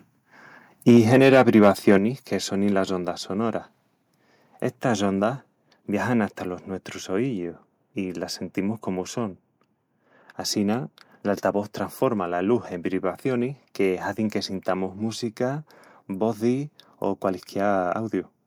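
It's a speech clip, and right at the start, from 0.88 to 1.96 s, you get a stretch of microphone overload. The loudest peaks run about 5 dB past what the converter can represent, so their tops get flattened, and a few percent of the samples in that stretch end up sitting at the ceiling. That's what gives those syllables the harsh, crackly edge. The cause is most likely an input gain set too hot. Then there's the microphone volume stepped down, which happens twice: at 0.97 s, by about 2 dB, and again at 1.98 s, by about 6 dB, just before "que sonin las". Each time the voice and the background drop together in one sudden step. That's likely the call software noticing the clipping and pulling the device's input level down, which is why the bigger cut lands right as the distorted stretch ends.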